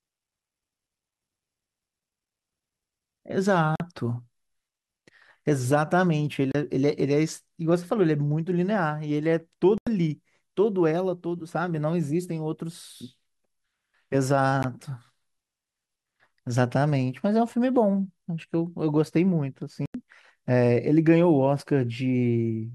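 Speech clip with five short silent holes where the sound cuts out abruptly and then resumes further along, as though it had kept playing underneath: at 3.76–3.80 s (about 44 ms), 6.52–6.55 s (29 ms), 9.78–9.87 s (87 ms), 14.63 s (15 ms) and 19.86–19.95 s (87 ms). This is likely a Bluetooth dropout, with packets arriving too late at the headphones and being discarded. Every gap length is a multiple of roughly 14.5 ms, which fits whole packets being lost.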